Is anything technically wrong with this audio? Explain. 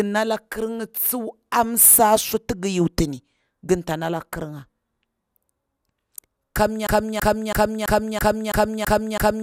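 Yes. From 6.87 s to the end of the clip, the speech falls into a broken-record loop: a 0.33 s fragment repeats exactly, back to back, eight times. The likely cause is a stall in the player, encoder or stream that kept re-sending the last buffered fragment instead of new audio. It sounds like a stuttering, mechanical repetition with identical timing on each pass, and whatever speech should have followed is lost.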